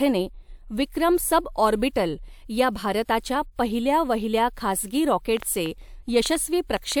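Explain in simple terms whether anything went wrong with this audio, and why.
Near the end, from 5.37 s to 6.93 s, just after "भारताच्या पहिल्या वहिल्या खासगी", a train of clicks runs over the speech: around seven sharp ticks of similar shape, arriving at roughly four per second but at an uneven pace. They stand out clearly above the voice. The likely cause is an outside source injecting brief pulses into the signal, such as electrical interference from nearby equipment or a faulty connection or power supply.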